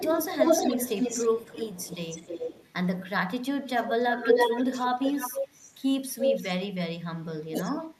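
From 0.0 to 2.66 s, 3.68 to 3.89 s, 4.15 to 5.74 s, 6.08 to 6.46 s and 7.63 to 7.75 s there is echo leak: a delayed copy of the speech trails the original by about 310 to 320 ms. The copy is nearly as loud as the original in the first, third and fourth spans, and faint in the second and last. The likely cause is a far-end loudspeaker whose echo canceller let its microphone pickup return. Unlike room reverberation, this is a distinct repeat rather than a smooth decay.

Speech suppressed in double talk appears briefly at 4.40 to 4.44 s as a shallow dip of about 5 dB. From 7.48 to 7.74 s it becomes a deep cut of about 25 dB, overlapping the last echo. This is likely an echo canceller ducking the talker while the echo plays. It differs from a network dropout because the echo canceller turns the level down rather than the signal being lost in transit.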